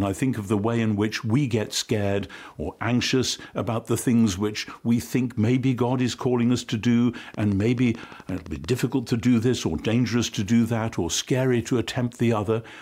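From 7.34 to 8.74 s there's a train of clicks: a steady run of sharp, identical ticks at about 11.5 per second, around fifteen in all, popping out at roughly the same level as the sound itself. They keep their even spacing straight through, gaps included, so they sit on top of the audio rather than coming from it. The likely cause is interference from nearby gear or a faulty connection or power supply injecting repeated pulses.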